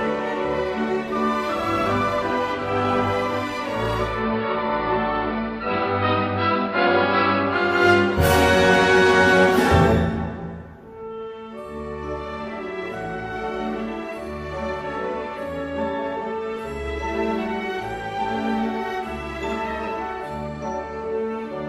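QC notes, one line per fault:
3.86–7.91 s, digital radio blending to analogue: signal drops to AM over a 0.4 s crossfade, so hiss creeps in, about 2 dB quieter.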